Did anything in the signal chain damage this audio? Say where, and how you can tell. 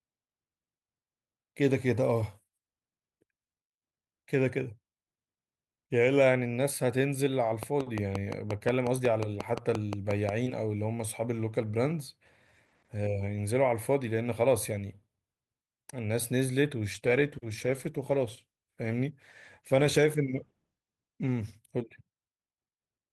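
Yes. From 7.63 to 10.30 s there is a train of clicks: about fifteen near-identical pops at a regular 5.6 per second, peaking about 10 dB above the speech. Their uniform shape and steady spacing point to the analogue wiring or interface stage, most likely interference pickup or a faulty connection or power supply.

From 16.92 to 21.63 s a call bitrate drop occurs at the network and codec stage. The speech turns coarse and muffled, with high frequencies cut, for about 4.6 s. This fits the bandwidth estimate falling and the Opus encoder going from 48 kbps to 16 kbps.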